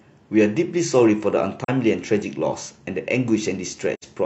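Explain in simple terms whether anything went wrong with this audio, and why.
The speech briefly drops out twice: a short gap from 1.64 to 1.69 s, and a longer one from 3.94 to 4.04 s. Each fades out and back in softly. This is AAC frame loss with muting. Pieces of the compressed stream went missing, about 43 ms and then about 85 ms, which fits one and then two lost frames. The decoder filled them with silence, and its overlapping blocks smoothed the edges.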